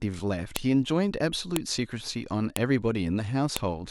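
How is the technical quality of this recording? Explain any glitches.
The recording has one recurring fault: file header played as audio. Sharp, loud clicks land at 0.56, 1.56, 2.56 and 3.57 seconds. They come exactly one second apart. The speech seems to have been joined from one-second pieces, each still carrying its file header. Those few dozen header bytes are read as samples. Each one produces a brief, hard snap. It cuts through the speech regardless of what the audio is doing at that moment.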